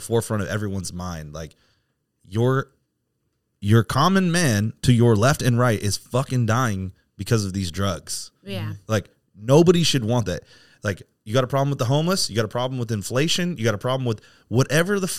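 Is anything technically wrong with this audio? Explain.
No, nothing is technically wrong with this audio. There is no fault to explain.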